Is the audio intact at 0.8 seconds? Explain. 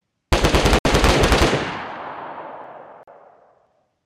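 No. From 0.79 to 0.85 s there is a 64 ms hole of silence, likely a Bluetooth dropout where late packets were discarded. The sound then resumes further along, as though it kept playing, rather than picking up where it stopped as a stall would.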